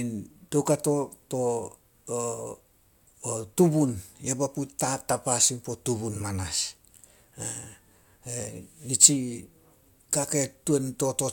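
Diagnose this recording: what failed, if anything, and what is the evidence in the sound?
Nothing in the speech stood out as a fault on listening, at any stage from capture to playback.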